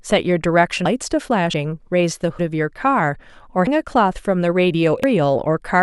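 This speech clip shows the signs of a likely dropped buffer (overrun), with captured audio overwritten before being read. At 0.85, 1.54, 2.39, 3.67 and 5.04 seconds the speech jumps forward, skipping roughly a tenth of a second at 1.54 and 2.39, about 0.15 seconds at 3.67 and 5.04, and about a third at 0.85.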